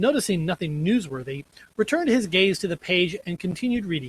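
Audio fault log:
0.52–3.59 s, clock drift buffer slips: A click recurs about every 1.02 s, roughly four times in this span. Each is a brief discontinuity in the speech. The likely cause is two devices running on separate clocks, a couple of hundred parts per million apart. The buffer between them slowly fills or drains. When it runs out of room, a handful of samples are dropped or repeated at once, and the waveform jumps.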